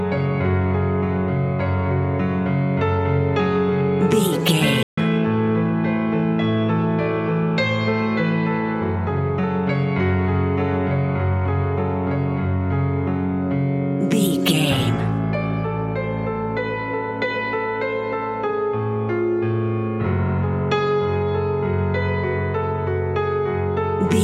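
At 4.83 s the sound cuts out for about 145 ms and then resumes, a playback stall, likely the player running short of data or having its thread blocked briefly.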